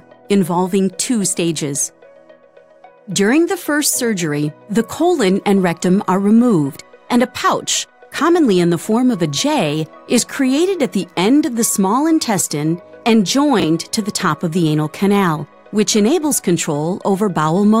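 At 13.6 to 13.64 s, chunks out of order: one 20 ms chunk of audio was delivered late, so it plays one chunk after the position it belongs in, swapping places with its neighbour. No audio is lost, but the reordering leaves three hard joins within those 40 ms, where the waveform jumps abruptly. The result is a brief jumbled, garbled moment in the sound.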